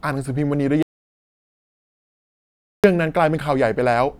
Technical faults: audio dropout to silence

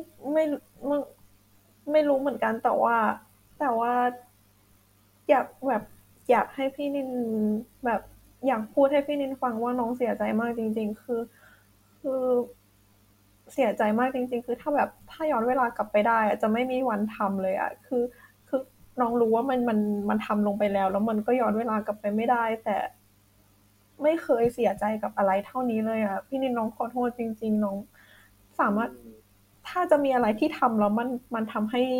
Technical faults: none

